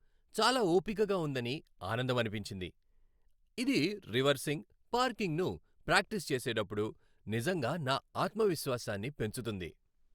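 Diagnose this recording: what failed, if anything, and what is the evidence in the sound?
Nothing failed here: the speech runs along without a single dropout, click, glitch or distortion to point at, so there's no fault to trace to any stage of the chain.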